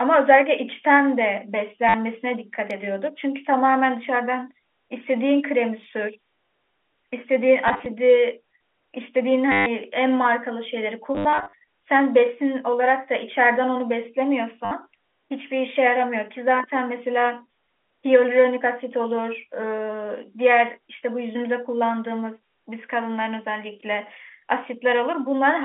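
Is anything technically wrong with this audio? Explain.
Yes. There is packet loss with the last packet repeated, at 1.89, 7.68 to 7.86, 9.52 to 9.66, 11.15 to 11.53 and 14.65 s. Missing packets were filled by replaying the previous one. Longer runs buzz near 100 Hz, which fits 10 ms packets. It sounds like a robotic stutter over the band-limited telephone sound.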